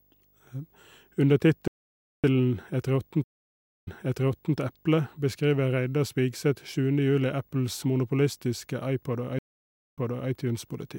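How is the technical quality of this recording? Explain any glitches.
The recording has three kinds of fault: a constant video buzz, one playback stall and two stream reconnects.

Video or display buzz runs through the whole speech clip. A screen or video cable is coupling into the audio path. The result is a 50 Hz buzz at the picture's field rate with hash above it, plus a thin whine at 15.6 kHz from the line scan. It sits about 40 dB below the speech, so it is quiet.

A playback stall runs from 1.68 to 2.24 s. The sound cuts off in mid-flow and stays silent for about 0.56 s, then carries on. The likely cause is that the player ran out of buffered data or its audio thread was blocked until it could resume output.

Stream reconnects occur at 3.24 to 4.56 s and at 9.39 to 10.30 s. In each, the connection dropped, the player went silent, reconnected and started a fresh decoder mid-stream. 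The first gap lasts about 0.6 s. The speech then resumes 0.72 s earlier than where it broke off, just before "eple beskriver", so a stretch is heard twice. The second gap lasts about 0.53 s and jumps back 0.38 s. Each restart sounds muted or faded in.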